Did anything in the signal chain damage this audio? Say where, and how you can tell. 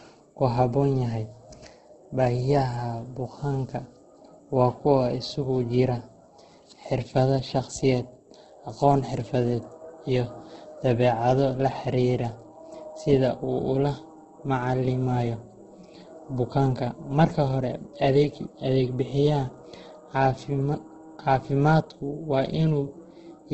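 Yes. Across the whole speech clip the sound is rough, grainy and noisy rather than swirling, with no content above about 8.2 kHz. That points to the codec stage, and the likely cause is heavy Opus compression in its music (CELT) mode at a wideband setting. Starved of bits, the encoder keeps each band's energy but refills the detail with folded copies of lower bands or noise. That gives the grain instead of holes, and the hard 8.2 kHz ceiling fits a very low bitrate of around 12 kbps.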